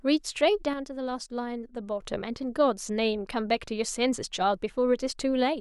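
From 0.73 to 2.02 s the speech drops abruptly by about 6 dB, likely one channel dropping out before the mono sum; the waveform shows a sharply stepped, lower-amplitude block.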